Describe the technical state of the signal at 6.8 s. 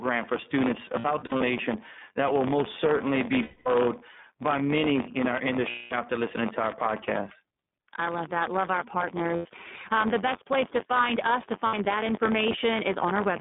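At 6.8 s, as across the whole clip, the writer and reader of the output ring buffer have slipped and cross inside every period. A small slice of each buffer repeats audio from roughly 20 ms earlier, so hard joins recur at 93.8 Hz, which fits a 512-sample buffer, giving a steady robotic buzz riding on the speech.

The speech also passes through the iLBC codec, which rebuilds each 30 ms frame's excitation independently and keeps only the 150 Hz to 3.6 kHz telephone band. That leaves the voice muffled and clearly rough and synthetic, consistent with iLBC's 13.33 kbps mode.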